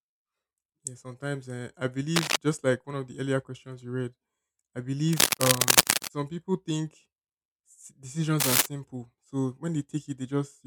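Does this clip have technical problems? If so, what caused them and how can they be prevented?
Yes: cable scratch noise after "sometimes uh I" (2.15–2.36 s), after "questions you read I" (5.09–6.08 s) and at 8.40–8.66 s. Ragged broadband bursts, somewhat louder than the speech, show as dense vertical smears on a spectrogram, most likely from a worn connector's shifting contact. Reseat or replace the cable and keep it still while recording.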